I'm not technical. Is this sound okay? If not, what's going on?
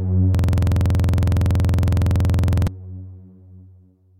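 No. From 0.35 to 2.67 s there is a system hang loop. The computer froze, and the sound hardware kept replaying the same 46 ms scrap of audio, about 50 times. That repeats 21.5 times per second, so it sounds like a rapid, rattling buzz.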